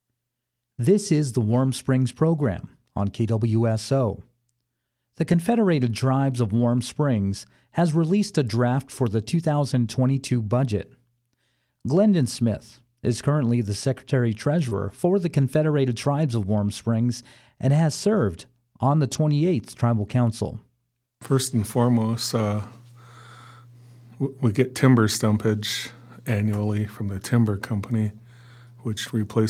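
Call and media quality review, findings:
Lost packet rebuilt from error correction, 5.31 s. Brief rough, noisier patch, about 20 ms, no gap. Receiver-side decoder playing the low-bitrate copy carried in the next packet (Opus in-band FEC). Fits one lost packet.

Lost packet rebuilt from error correction, 14.71 s. Same coarse, noisy texture for about 20 ms, overlapping the concealment below. Decoder substituting the lower-quality redundant copy. Fits one lost packet.

Lost packet rebuilt from error correction, 19.09–19.15 s. Longer degraded stretch, about 40 ms, audio continuous but grainier. Decoder playing the redundant copy for each missing frame. Fits two separate lost packets.

Short concealed packet loss, 14.69–14.73 s. Brief smear or wobble where about 20 ms of audio arrived too late. The jitter buffer and decoder extended the preceding sound for about 16 ms, then cross-faded back into received audio. 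Lands directly against the error-correction rebuild at 14.71 s.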